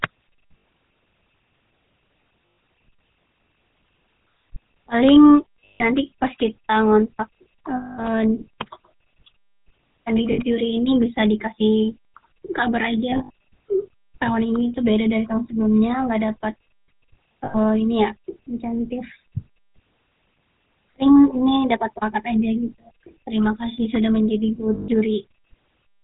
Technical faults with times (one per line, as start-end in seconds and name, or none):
0.00-26.04 GSM full-rate codec
0.58-0.64 lost GSM frames
2.46-2.58 lost GSM frames
5.64-5.82 lost GSM frames
7.76-8.06 lost GSM frames
10.32-10.40 lost GSM frames
13.10-13.30 lost GSM frames
17.44-17.55 lost GSM frames
24.74-24.89 lost GSM frames